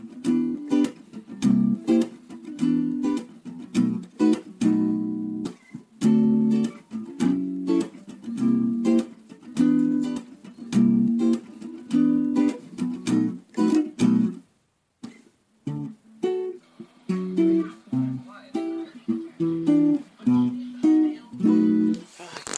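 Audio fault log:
No faults can be heard anywhere in this recording of sounds. Nothing needs logging at any point in the clip.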